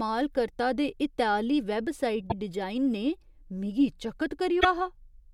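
Damaged data in the compressed stream, at 2.27 to 2.32 s and 4.57 to 4.65 s, makes the decoder misread frames and lose sync, giving short glitches in the speech.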